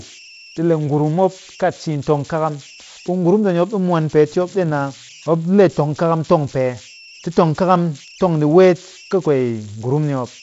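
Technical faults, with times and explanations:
Throughout, converter idle tones: a whistle around 3 kHz, about 23 dB below the speech and clearest in pauses, as an undithered delta-sigma converter locks into repeating bit patterns on small input. A spectrogram shows a thin, steady horizontal line near 3 kHz.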